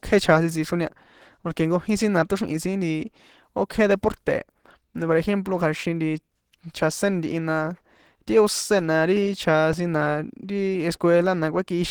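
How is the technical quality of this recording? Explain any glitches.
The recording has two faults: constant codec damage throughout and one brief glitch near the end.

Opus compression, throughout: the speech sounds plainly muffled and hoarse, the character of the codec's hybrid speech mode. That points to a low bitrate of around 16 kbps, though Opus is only the likely source. Content still reaches about 20.2 kHz.

Repeated buffer, at 9.73 s: new audio arrived late, so the playback device replayed its last tiny buffer twice more. The same sliver sounds three times with hard joins, heard as a click. Its length fits a 64-sample buffer.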